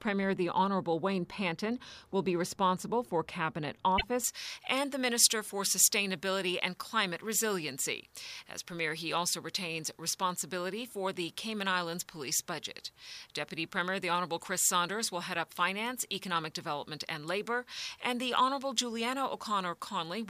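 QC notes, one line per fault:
3.97–4.04 s, repeated frames: right after "be responsible for cabinet" there's a quick stutter where one 24 ms chunk plays twice. It looks like a compressed frame got written or sent again, so the audio runs 24 ms longer.
4.24–20.29 s, pre-emphasis left on: from just after "be responsible for cabinet" to the end, the top end jumps up, about 11 dB hotter at 10 kHz than at 1 kHz, so everything turns thin, bright and hissy on the esses. The treble boost, which fits a J.17-style curve, never got its matching cut.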